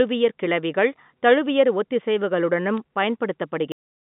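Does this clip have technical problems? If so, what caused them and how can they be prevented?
Yes. Bit errors on a digital phone line occur at 2.78 s. The speech travels as G.711 A-law samples, 8 bits each on a logarithmic scale, and a flipped bit corrupts one sample. When the hit lands on the sign or a high-order bit, that sample jumps far from its neighbours, which the ear hears as a click over unchanged speech. The error rate here is very low, around one bit in two thousand. A cleaner line, or a link with error detection and concealment, would prevent this.

A cut-off end occurs at 3.72 s, where the sound stops abruptly mid-utterance and drops straight to digital silence for the remaining moments of the recording. There is no natural decay, because the final buffers of audio were never written to the file or played out, so the recording simply ends where the data ran out rather than where the speech did. 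Flushing and closing the recording stream properly before stopping would prevent it.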